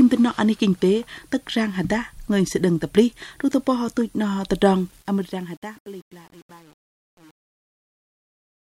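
The audio fades out to 8.71 s, and from 4.73 s the fade shows truncation distortion. Between 5.05 s and the end it turns gritty, which fits an undithered stage keeping only 8 bits.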